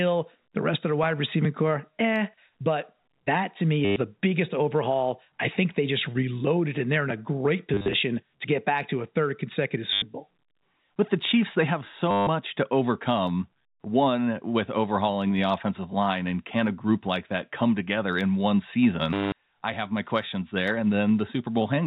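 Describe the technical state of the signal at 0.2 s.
At 0.2 s the speech comes through intact, carried by the telephone-band G.711 path, with nothing above 4 kHz and only the faint level-following quantisation hiss that the format brings.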